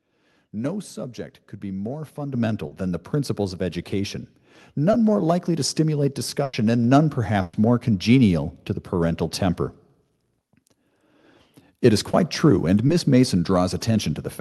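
At 2.34 s the microphone volume stepped up. The input gain jumped by about 8 dB in one step, and the speech and the background noise floor rise together and stay raised. That shared, lasting rise is what separates an automatic gain step from a talker simply getting louder, which would lift the speech but leave the room noise where it was.

Short concealed packet loss follows at 2.67 s (40 ms), then 4.91 s, 12.11 s and 12.87 s (20 ms each). Each time, a sliver of audio never arrived and the decoder bridged it by extending the preceding sound. The result is a brief smear or wobble rather than a gap. A short consonant can disappear inside it. These are too short for any audible fade.

Two bursts of packet loss come at 6.43 s (100 ms) and 7.41 s (120 ms). Here several packets' worth went missing, so the concealment runs long enough to be heard decaying: voiced sound turns into a held buzz and unvoiced sound into a fading hiss. 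The speech then picks up later, with that stretch gone. Their length and the audible decay mark them out from the short glitches.

All of this sits on an Opus call path, whose top end stops near 12 kHz.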